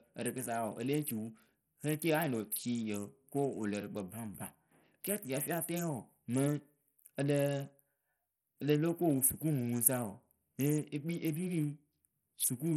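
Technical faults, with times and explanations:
Throughout, Bluetooth SBC compression: the signal has likely passed through an SBC link starved of bits, which fits a stream around 64 kbps. The codec's few wide sub-bands get a crude bit allocation with no hearing model, so the upper bands are dropped or coarsely quantised. The speech has nothing above 15.9 kHz, and heavy damage below that cut-off leaves the treble flickering, with gritty quantisation noise and aliasing clinging to the sound.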